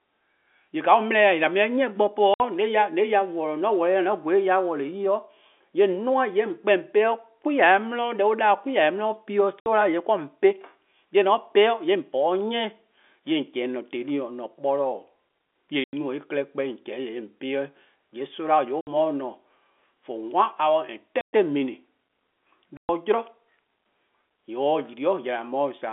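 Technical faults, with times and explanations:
2.34, 9.60, 15.84, 18.81, 21.21 and 22.77 s: packet loss filled with silence. The speech drops out for 60, 60, 90, 60, 120 and 120 ms. These are multiples of 30 ms, which fits 30 ms packets. The waveform shows flat near-silent stretches, and the spectrogram shows sharp-edged blank columns across the narrow telephone band.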